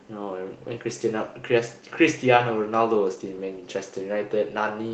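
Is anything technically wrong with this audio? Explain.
No, nothing technically wrong here.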